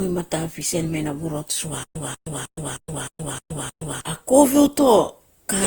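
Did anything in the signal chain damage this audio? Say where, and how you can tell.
Yes. Generation loss runs through the whole clip, at the codec stage. The speech has a swirly, hollow smear and soft, blurred onsets, more than a single pass at 48 kbit/s Opus would leave. This likely comes from around ten successive decode and re-encode cycles. Each pass requantises on a fresh frame grid, so coding noise and spectral holes accumulate instead of staying fixed.

Stutter with silent gaps occurs from 1.83 to 4.00 s, at the playback or stream-buffer stage. A 189 ms burst of audio repeats seven times at a steady 310 ms period, with about 121 ms of digital silence after each repeat. This is likely a stalled player or stream that replays its last fragment on each retry and then runs dry. The audio that belonged in that span is missing.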